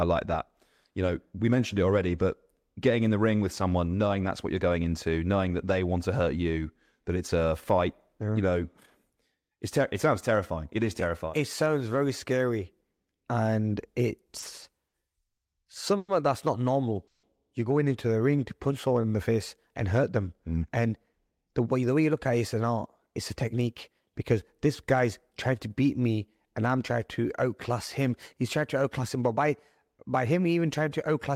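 From 14.39 to 15.39 s, late-arriving packets repeatedly emptied the jitter buffer, producing repeated stalls (stutter). There are four filled gaps totalling 180 ms, the longest 80 ms, so the speech drags and stutters with nothing lost.

Call audio freezes follow at 15.97 to 16.10 s, just before "that's not", and at 17.07 to 17.25 s. These were likely caused by packets being held up until the buffer ran dry. The last sound is stretched into a fading buzz or hiss for 110 ms and then 160 ms, the second ending in about 10 ms of silence before speech resumes.

From 18.12 to 19.13 s, between "going into" and "the face and hurt", a jitter buffer slow-down repeats pitch periods to rebuild reserve. About 89 ms is added, so the speech runs at 92% speed with unchanged pitch.

After "hurt them mm and", from 21.02 to 25.06 s, a jitter buffer speed-up trims pitch periods to cut excess delay. It removes roughly 0.3 s, and the speech sounds hurried at 107% speed.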